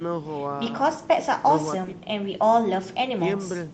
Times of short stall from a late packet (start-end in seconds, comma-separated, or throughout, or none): none